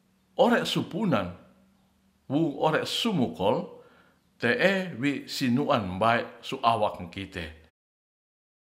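No technical faults can be heard in this speech recording. Near the end the level fades out smoothly, beginning at roughly seven and a half seconds and reaching silence by 7.71 s, with no click or hard edge.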